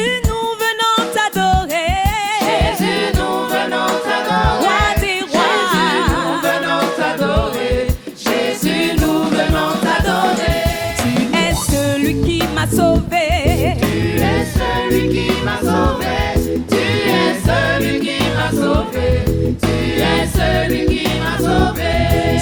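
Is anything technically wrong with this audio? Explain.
No, nothing in this audio points to a technical fault. Nothing calls for correction.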